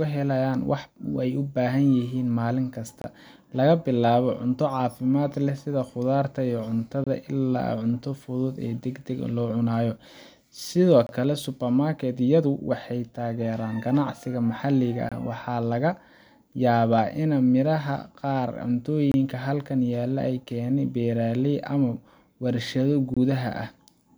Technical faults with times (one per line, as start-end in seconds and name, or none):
3.02-3.04 gap between chunks
7.04-7.07 gap between chunks
11.07-11.09 gap between chunks
15.09-15.12 gap between chunks
19.12-19.14 gap between chunks
23.14-23.17 gap between chunks